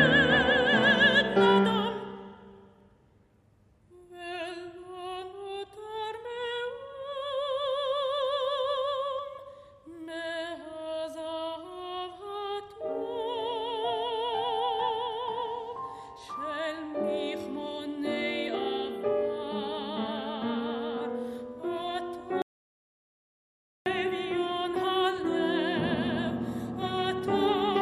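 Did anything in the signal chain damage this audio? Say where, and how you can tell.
Yes. From 22.42 to 23.86 s the sound cuts to silence for about 1.4 s; an audio dropout to silence, likely a lost input link while silence was recorded.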